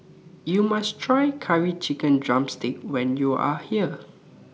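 No technical faults can be heard anywhere in the speech recording.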